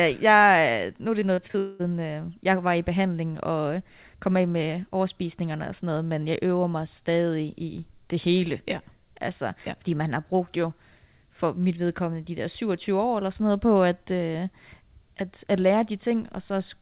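After "nu er", 1.2 to 1.56 s has repeated packet loss. Four brief holes, up to 39 ms, are patched over, so the speech sounds choppy and robotic.

From 1.58 to 1.81 s, a fading buzz replaces the speech, likely from a long network dropout. Speech returns at "øh jeg var i".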